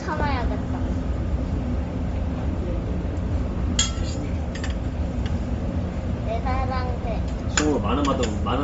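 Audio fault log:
Throughout: Bluetooth LC3 compression. Nothing reaches above 7.7 kHz, with grainy, noise-filled upper content, likely from a low-bitrate LC3 stream near 32 kbps.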